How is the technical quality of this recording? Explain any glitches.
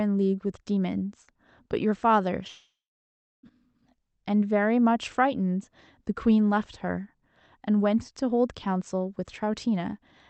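The recording has one clear glitch, a long network dropout in the speech from 2.47 s to 3.46 s. From there the sound turns to a decaying buzz that fades into near-silence, with about 0.71 s of that stretch essentially empty, before the speech resumes. The likely cause is that packets stopped arriving for roughly a second. The receiver stretched the last received sound to fill the gap, then gave up, and the missing audio was never recovered. On a waveform this shows as a short tapering tail followed by a flat line. On a spectrogram it appears as smeared, featureless energy dissolving into a dark blank band. The call path's Opus coding limits the audio to an 8 kHz bandwidth, so the spectrogram also shows an empty region above 8 kHz throughout.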